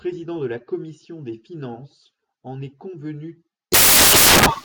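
Loud, harsh broadband noise takes over this speech recording at 3.72 s, right after "finances en est convenu", and lasts to the end of the clip. These are samples built from the wrong bytes: the reader assembles each sample with its bytes misaligned or swapped, so the rapidly fluctuating low-order bits land in the most significant position and swamp the real waveform.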